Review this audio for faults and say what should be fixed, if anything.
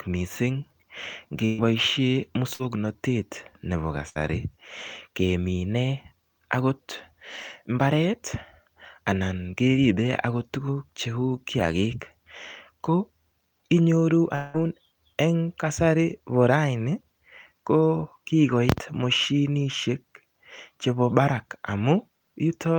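Bursts of packet loss occur at 1.45 to 1.61 s, 2.54 to 2.62 s and 4.09 to 4.18 s. Runs of consecutive packets never reached the player in time, so the receiver stretched the last received speech across each hole, for about 126 ms, 52 ms and 61 ms respectively, while turning it down. Each gap sounds like a brief held buzz or fading hiss, and speech resumes having skipped roughly 120 ms, 60 ms and 60 ms.

A long network dropout, the likely cause, explains the event at 14.35 to 14.57 s. For about 184 ms the speech is replaced by a concealment tail that decays as it continues, with no stretch of pure silence. The talker then picks up about 180 ms further on, with that portion of speech gone.

Both problems would be reduced by a larger adaptive jitter buffer combined with forward error correction or redundant packet transmission on the link.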